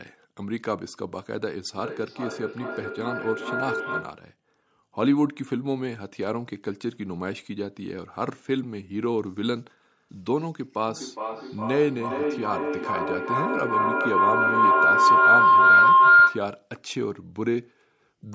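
Speech with two bursts of feedback howl, from 1.78 to 4.32 s and from 10.88 to 16.62 s. A whistle near 1.5 kHz swells, with the loop repeating roughly every 400 ms, peaking about 3 dB below the speech the first time and about 11 dB above it the second. Unlike ordinary echo, whose repeats fade, each pass round a microphone-to-loudspeaker loop comes back louder and narrower, which points to two devices sharing one room.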